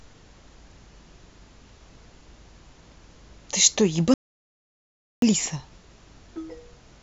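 A speech recording with an audio dropout to silence from 4.14 s to 5.22 s. The speech cuts off abruptly and the signal falls to silence for about 1.08 s, with no room tone or noise floor underneath, then resumes mid-flow. That silent gap points to the input being lost while the recorder kept writing samples, likely a momentary disconnect or a brief mute. Whatever was said during that second is unrecoverable.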